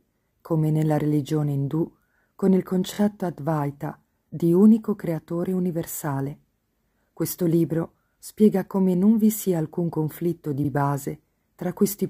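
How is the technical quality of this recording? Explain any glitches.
The recording has two brief stutters from repeated frames. At 2.93 to 2.97 s, a block of about 23 ms plays three times in a row, which fits a single compressed frame being sent or written twice more than it should. At 10.64 to 10.68 s, a 46 ms stretch, which fits two frames, plays once more. Each event makes the decoder replay the same slice of sound, producing a quick stammer and stretching the audio by about 46 ms.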